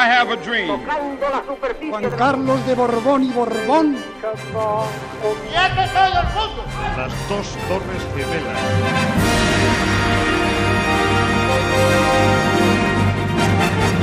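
From 1.75 to 2.15 s a gritty burst of crackle tears across the sound, then stops. This is processor overload crackle: the processor kept missing its deadlines for buffers of a few milliseconds, and around ten of them were skipped, each leaving a hard-edged gap.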